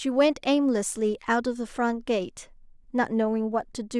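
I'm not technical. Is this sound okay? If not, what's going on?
Yes, this one's fine: there's nothing wrong with it that you'd need to worry about.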